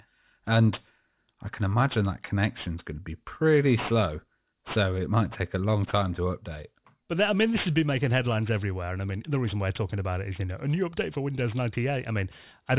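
Throughout the speech, sibilants sound gritty and metallic, with the spectrum running hard up to about 4 kHz. This is aliasing: high frequencies folded back as false tones, roughly 20 dB below the voice, which points to a drop to an 8 kHz rate without an anti-alias filter.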